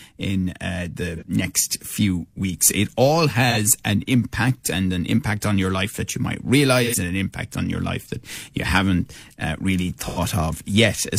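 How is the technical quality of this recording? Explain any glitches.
The speech has four brief AAC frame loss with concealment dropouts. At 1.16 s (between "in uh the" and "next few weeks") and 3.51 s (before "an impact and an"), roughly 43 ms is patched, consistent with one lost frame. At 6.84 s (between "life that you might" and "and an impact on") and 10.07 s, about 85 ms is patched, consistent with two frames. The decoder rebuilds each missing stretch from the last good spectrum, so each spot comes out as a short smeared, noisy or phasey blur.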